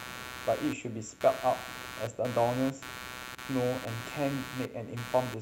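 Throughout the speech runs computer activity noise, a buzzy chirping from the computer's load changes on the shared ground, pulsing around 150 times a second, roughly 10 dB under, showing as regular vertical spectrogram striations.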